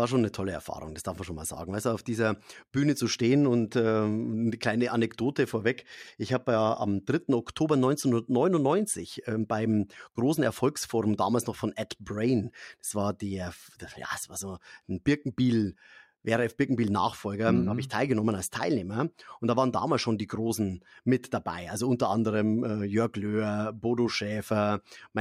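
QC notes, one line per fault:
Nothing to flag here; the speech comes through without any trouble worth noting.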